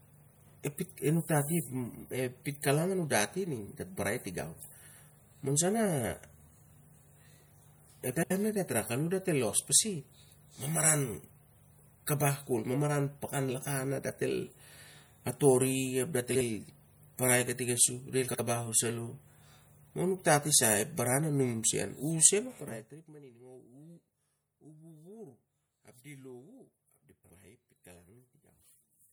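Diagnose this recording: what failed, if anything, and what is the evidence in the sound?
Codec stage. The speech sounds watery and swirly throughout, with smeared attacks and metallic chirps on sibilants. The damage is plainly audible and fits a low MP3 bitrate around 64 kbps. Likely cause: MP3 compression starving weak frequency lines, which then flicker between frames.

Network or storage stage: frames out of order. Short garbled flutters occur at 8.15 to 8.31 s, 16.30 to 16.41 s, 18.28 to 18.40 s, and 27.24 to 27.36 s, just after "ap di". Each stretch plays its two halves swapped. The first uses 78.4 ms blocks and the others 52.2 ms blocks, which fits three and two MP3 frames respectively. No time is lost.

Gain stage: zipper noise. From 22.36 to 23.17 s, a fine ticking rides on the speech while the level drops by around 25 dB. The fade moves in 1 dB steps at roughly thirty per second, with no smoothing between them. 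Each step jumps the waveform and clicks.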